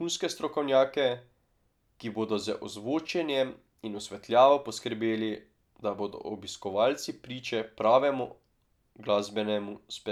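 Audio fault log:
No faults heard anywhere in the speech.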